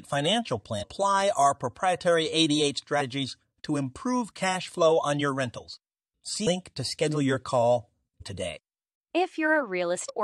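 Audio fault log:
0.82–0.84, 3.00–3.02, 6.46, 8.20 and 10.08–10.10 s: damaged data in a compressed stream. Brief chirps or blips as corrupted frames throw the decoder out of sync until it locks onto the next valid frame header.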